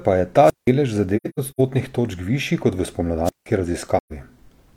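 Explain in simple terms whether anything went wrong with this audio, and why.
Wireless microphone squelch dropout happens twice: from 0.42 to 0.71 s, just after "pa je ta", and from 3.24 to 3.46 s, just after "točk višji kot v". A radio microphone's signal weakened so much that the receiver shut its output off to avoid blasting static. You hear a brief surge of hiss, then roughly 170 to 175 ms of near silence, then the speech comes back.

AAC frame loss with muting shows up from 1.16 to 1.61 s, just before "točk višji kot v", and again from 3.98 to 4.13 s. Chunks of the compressed audio went missing, and the decoder filled each gap with silence. In the first stretch, about 256 ms is lost in several pieces spread across roughly 430 ms, the longest about a tenth of a second. The second gap is 128 ms. The sound fades out and back in softly.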